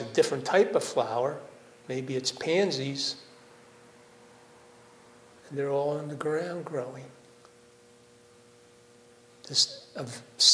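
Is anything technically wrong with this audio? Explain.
No, nothing technically wrong can be heard in this audio.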